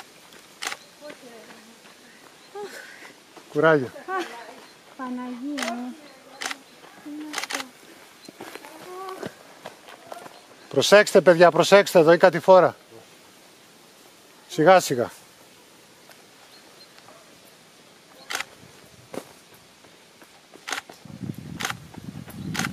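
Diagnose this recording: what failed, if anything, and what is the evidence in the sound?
Nothing failed, and the sound gives no evidence of any fault at any stage.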